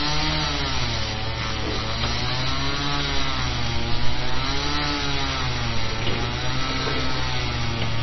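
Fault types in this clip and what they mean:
MP3 compression: Throughout, the sound is watery and swirly, with weak detail flickering in and out and nothing at all above about 5.9 kHz, which leaves it dull and boxed-in. The likely cause is heavy MP3 coding at a very low bitrate, one that fits roughly 24 kbps. Starved of bits, the encoder chops the treble at a fixed point and drops quiet frequency lines that come and go between frames.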